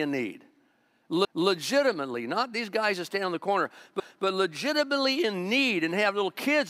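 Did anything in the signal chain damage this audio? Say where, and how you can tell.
Yes. The speech was processed in chunks that overlap at the joins, a fault in the buffering stage: each new block begins about 250 ms before the previous one ended, so that stretch of sound is played twice. This shows up as a stutter from 1.25 to 1.5 s and again from 4.0 to 4.25 s, between "stand on the corner" and "legitimately in need and". The chunks are 2.5 s long.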